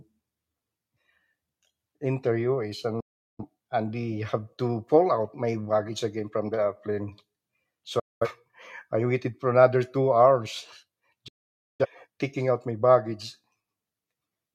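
Speech drops to silence three times, each entry softened by a very quick fade of about 8 ms rather than a hard click: from 3.00 to 3.44 s, from 7.99 to 8.27 s, and from 11.28 to 11.86 s, just before "taking out my". These are digital broadcast dropouts. The receiver muted while frames were missing or failed their check, so the speech sent during each gap is gone. The hole lengths fit roughly nine, five and twelve lost frames.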